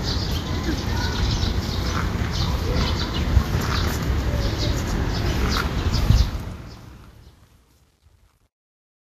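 Throughout the clip, a low-bitrate lossy encode has discarded everything above 14.2 kHz and quantised the remaining treble so coarsely that fine detail has turned into noise of similar energy. The damage is plainly audible: the top end sounds hissy and grainy, tones are roughened, and attacks are smeared. The missing band and texture are most likely Vorbis compression, and the degree of damage points to a rate in the region of 34 kbps.

From 6.06 s to the end at 9.11 s, the gain stage handling the fade-out has kept too few bits and added no dither, which fits a 10-bit word length. As the level drops toward the smallest step, the waveform collapses into a few square steps. This is truncation distortion on a fade. The tail of the fade-out turns gritty, and from 6.74 s onward it is at its worst.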